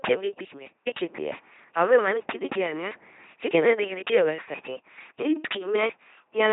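Throughout, the speech has passed through an LPC-10 vocoder, which fits a 2.4 kbit/s rate: each moment is synthesised from pulses or noise, giving heavy mechanical buzzing with nothing above 3.8 kHz.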